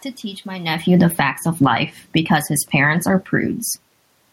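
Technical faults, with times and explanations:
0.76 to 1.35 s, automatic gain falling: the gain control judged the level too high and pulled its gain down by about 11 dB over roughly 0.6 s. Speech and room noise sink together. The waveform envelope tapers steadily, and the whole spectrogram, including the noise floor, darkens.
1.26 to 3.39 s, automatic gain rising: starting just before the drop finishes, the control slowly raises gain by about 5 dB over about 2.1 s. Speech and room noise swell together. The waveform envelope widens gradually, and the spectrogram brightens uniformly across all frequencies.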